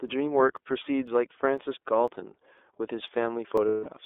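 Throughout, the speech carries the sound of the iLBC codec. The band runs only from about 300 Hz to 3.6 kHz, and the damage is plainly audible as a rough, slightly synthetic edge. The codec rebuilds each frame's excitation on its own, and the texture fits its 30 ms, 13.33 kbps mode. What separates it from a plain telephone band-limit is that graininess. Simple filtering would keep the narrow band smooth.

From 0.08 s to 3.58 s, periodic USB or driver dropouts produce a tick about every 0.5 s, roughly seven in all. Each time, a blocked bus or driver skips well under a millisecond of audio, so the waveform jumps and clicks. Nothing is filled in. Their strict regular spacing tells them apart from packet loss or random glitches, which land at uneven times and leave longer gaps.

From 3.69 s to 3.87 s, lost iLBC frames leave a 180 ms stretch, which fits six missing 30 ms frames. The decoder covers the hole by repeating the last pitch cycle with added noise, so it sounds like a held, buzzy, breathy vowel. 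Unlike a dropout, the gap is filled rather than skipped, and because iLBC frames stand alone, the voice is right again almost immediately afterwards.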